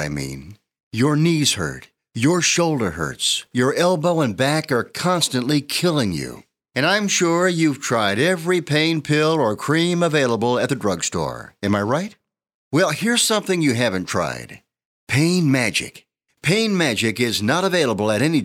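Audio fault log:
2.64 s and 8.35 s, dropped samples: you get two isolated, sharp clicks, each a thin vertical line straight up the spectrum with nothing missing from the speech around it. The likely cause is a single sample or so going missing from the stream, so the waveform jumps abruptly to a later value instead of moving smoothly. That gap is far too short to swallow any sound, but the instant step is broadband, which is why it comes through as a tick.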